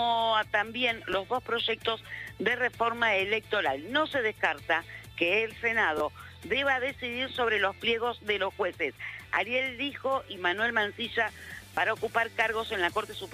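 At 1.13 s, 5.98 to 6.00 s, 9.36 s and 11.75 to 11.77 s the playback device ran out of fresh audio and played its last buffer again, a repeated buffer fault. Each repeated block lasts about 11.6 ms, which fits a 512-sample buffer. It plays once extra at 1.13 s and 9.36 s and twice extra at the other two points. Hard joins at every repeat make these short ticks or buzzy stutters, with roughly 10 to 20 ms of audio lost each time.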